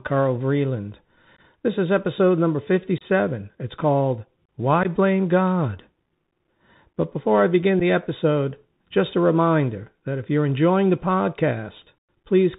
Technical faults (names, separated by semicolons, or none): Bluetooth CVSD headset codec; unconcealed Bluetooth headset packet loss